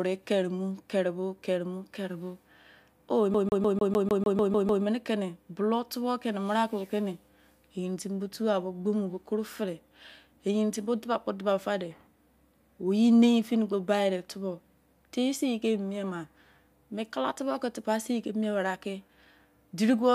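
From 3.34 s to 4.84 s the speech locks into a CD stuck on one turn: a scratch keeps knocking the laser back one track, so the same 150 ms fragment repeats ten times, each pass ended by a brief mute at the jump. It sounds like a rapid, perfectly even stutter. On a waveform the identical slice tiles across the span with thin gaps. A spectrogram shows vertical stripes spaced about 0.15 s apart.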